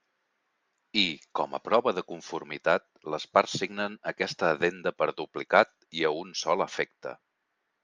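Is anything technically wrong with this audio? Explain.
No, nothing here sounds technically wrong; the speech comes through without any problem worth flagging.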